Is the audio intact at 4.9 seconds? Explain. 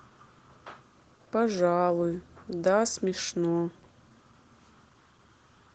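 Yes, the audio at 4.9 seconds is intact, with no dropout, glitch or other fault at that moment.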